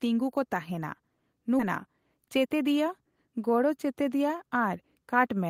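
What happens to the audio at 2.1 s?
Right around there the speech hurries along: 2.1 s falls inside a jitter buffer speed-up running from about 1.86 to 2.63 s. The receiver had more audio queued than it wanted, so it trimmed out small chunks a pitch period or so long, again and again, shaving off about a tenth of a second in total. Playback runs at about 112% speed, but the pitch stays put, so it just sounds briefly rushed rather than higher.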